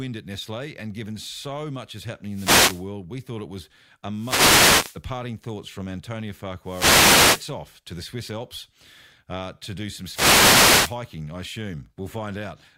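Wireless microphone noise hits break into this speech clip four times, from 2.28 to 2.89 s, 4.15 to 5.02 s, 6.62 to 7.55 s and 10.07 to 10.98 s, each a burst of static lasting roughly 0.6 to 0.9 s. They come from the analogue FM radio link fading as reflected copies of the signal cancel at the receiver, so the receiver's own noise surges up and swishes over the voice until the signal recovers.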